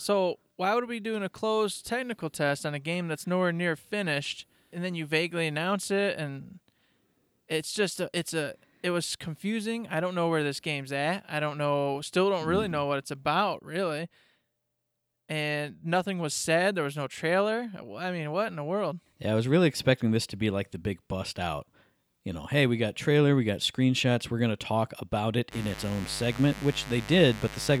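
Right after "to talk about it", at about 25.5 s, a mains buzz kicks in and carries on to the very end of the clip. It's a 50 Hz buzz, but not a smooth hum. Something like a dimmer, a rectifier or a missing shield is letting sharp switching spikes in twice per mains cycle, so harmonics stack up well into the kilohertz range. You hear a steady, raspy buzz sitting about 15 dB under the speech.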